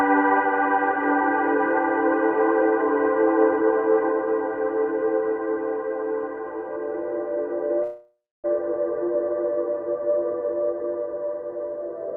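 The audio, carried over a call codec whose content stops near 12 kHz on a spectrogram, breaks up at 7.83 s in what is likely a long network dropout. The receiver fills about 0.6 s with a buzzy or hissy continuation of the last sound that fades to roughly 0.27 s of silence. About 0.4 s of audio never returns. In the waveform, the envelope decays into a flat gap before the sound resumes at 8.46 s. From 10.40 s to 11.97 s a jitter buffer speed-up trims repeated pitch-period slices to shed roughly 0.15 s of excess delay. The sound runs at about 110% speed without any pitch change, and the spectrogram shows compressed timing with unchanged harmonic spacing.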